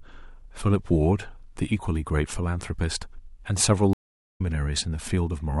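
Speech with a stream reconnect at 3.93–4.41 s: a 386 ms flat-line gap in the waveform, blank on the spectrogram, after which sound resumes roughly 0.3 s further along.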